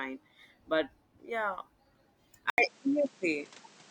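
Speech, with an abrupt change of character at 2.5 s: a brief gap of about 80 ms, then the sound runs through to the end with nothing above 9.1 kHz, a shift in level of around 5 dB, and a new background noise roughly 35 dB under the speech. That combination of dropout, narrower band and different noise floor points to an input switched to a poorer device, likely a different microphone or headset profile taking over mid-recording.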